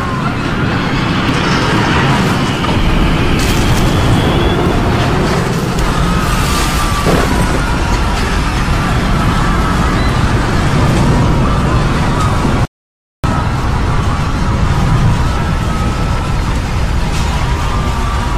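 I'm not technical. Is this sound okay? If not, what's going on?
No. The audio stream likely lost a few samples at a time, a tiny fraction of a millisecond each. These dropped samples make the waveform jump abruptly, heard as a single sharp click at 1.29, 3.26, 5.21, 10.88, 16.31 and 17.75 seconds.

There is also an audio dropout to silence, likely from the input briefly disconnecting or muting while recording continued. From 12.65 to 13.24 seconds, about 0.59 seconds, the sound cuts out completely, with no background noise, and whatever happened then is lost.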